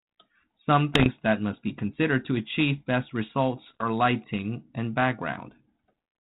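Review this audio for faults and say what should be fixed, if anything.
Two bursts of pops and rough, gritty crackle with brief level jumps, from 0.94 to 1.07 s just before "that must be considered" and from 3.66 to 3.85 s between "considered to achieve best" and "lighting and", are bit errors on an ADPCM link. Flipped bits, at a rate of around one percent, knock the 32 kbit/s G.726 decoder's step size and predictor off track, so each error rings on briefly. Prevent this by fixing the radio or line link and adding error protection.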